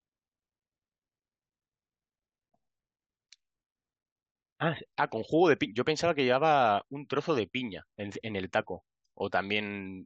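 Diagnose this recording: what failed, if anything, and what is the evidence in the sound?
Nothing failed: no stage in the chain, from analogue wiring through converter, buffer, processing, network, storage and playback, leaves any audible trace on this speech recording.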